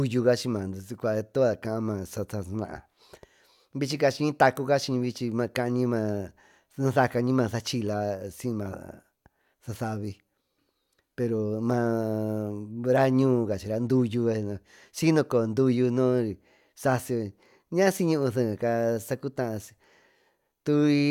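No technical faults can be heard in this clip.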